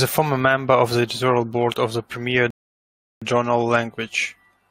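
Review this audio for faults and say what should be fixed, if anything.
A rebuffering stall runs from 2.50 s to 3.22 s: the player exhausted its downloaded audio and halted until more data arrived. The speech drops into 0.71 s of silence, then resumes exactly where it stopped, so nothing is lost but that time is added. A deeper playback buffer, or a stream bitrate that adapts to the available bandwidth, would prevent it.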